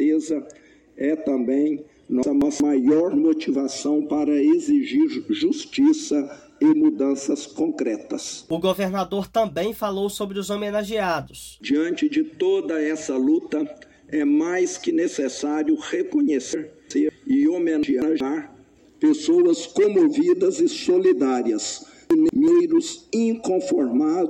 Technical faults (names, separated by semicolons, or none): chunks out of order